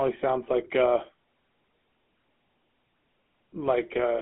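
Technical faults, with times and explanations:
Throughout, GSM full-rate codec: speech sounds buzzy and gravelly, because a vocal-tract model driven by coarse, regularly spaced pulses rebuilds it within a 200 Hz to 3.5 kHz band.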